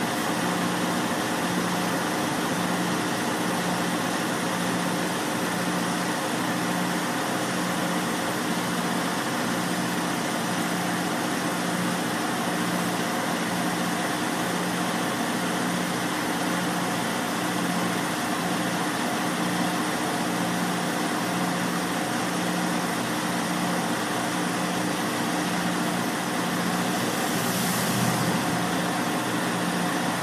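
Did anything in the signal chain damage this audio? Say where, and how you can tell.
Yes. Throughout, the sound is watery and swirly with smeared attacks, likely MP3 compression at a low bitrate near 64 kbps. A spectrogram shows a flat treble ceiling and flickering holes.

Compressed frames skipped at the storage or decoding stage, at 12.84 s and 28.49 s. Each jump skips about 70 ms, roughly three 26.1 ms frames, heard as a brief smeared blip. The waveform shows an abrupt content break there.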